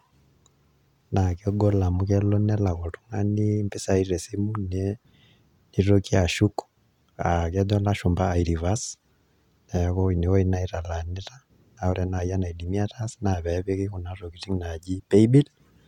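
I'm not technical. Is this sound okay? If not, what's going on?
Yes, this sound is okay, and nothing is going wrong with it.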